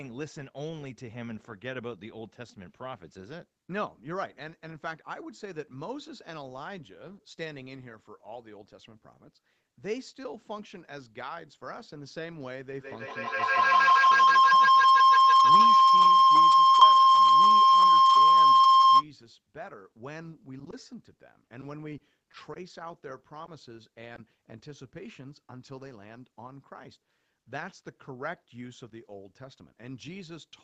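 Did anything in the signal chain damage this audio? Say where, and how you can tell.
Yes. A feedback howl from an acoustic loop between devices in the room runs from 12.78 to 19.08 s. A tone near 1 kHz rises to about 20 dB above the speech and pulses roughly every 150 ms. A spectrogram shows a bright horizontal line, and the waveform swells in regular beats.

Short concealed packet loss at the network stage hits at 20.64, 20.70, 23.46 and 24.16 s. In each case 20 ms never arrived and the decoder extrapolated the preceding sound, giving a brief smear or tick. The spectrogram shows a short stretched or blurred slice.

Scattered short gaps run from 21.16 to 22.58 s: roughly seven lost or late packets, none longer than about 20 ms, concealing around 100 ms in total. Each is patched by continuing the last sound, producing hiccups. On the spectrogram they appear as small smeared notches within Opus's band, which stops at 8 kHz.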